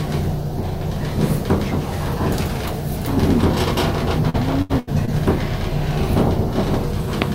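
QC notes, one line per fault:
4.29–5.09 s, repeated packet loss (robotic sound): four gaps, the longest 79 ms, are each filled by stretching the preceding sound. Unlike a silent dropout, this gives choppy texture across roughly a quarter of the span.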